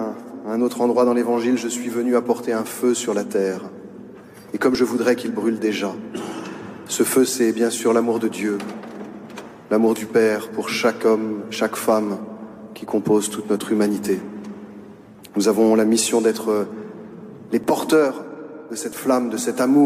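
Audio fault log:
4.75 s, 17.64 s and 18.92 s: dropped buffer (overrun). Each event is an abrupt jump in the sound with no gap of silence. About 10 ms of audio is missing each time, and the material on either side is butted straight together, so the waveform breaks at the join. The likely cause is capture software falling behind and letting the hardware overwrite a buffer before it was read.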